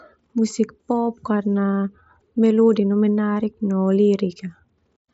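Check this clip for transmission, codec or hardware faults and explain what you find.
The speech reaches the listener through a Bluetooth mSBC headset link working as intended, with the codec's wideband limit leaving nothing above 7.7 kHz and no faults present in the signal.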